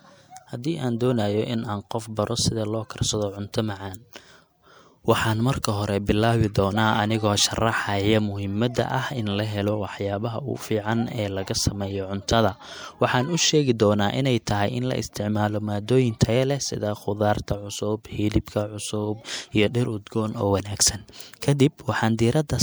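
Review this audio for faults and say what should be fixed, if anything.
Pre-echo shows up twice in this speech, at 5.62 to 5.64 s and at 6.54 s: the codec smears quantisation noise across the block, so short hiss arrives 20 and 14 ms before each attack. Giving the encoder shorter blocks around transients, or a higher bitrate, should fix it.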